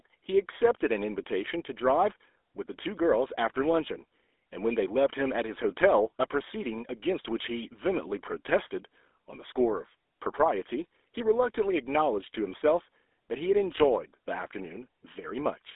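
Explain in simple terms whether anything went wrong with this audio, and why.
Throughout the recording, the speech carries the GSM full-rate codec, the old mobile-phone coder. Nothing above about 3.8 kHz remains, and voices turn buzzy and gravelly. A plain phone line would sound thin but smooth. This rasp comes from the codec rebuilding speech from pulses.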